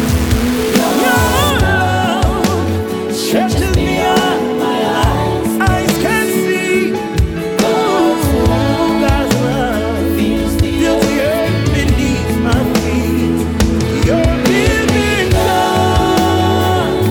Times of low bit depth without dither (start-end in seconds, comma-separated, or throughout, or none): 0.00-1.50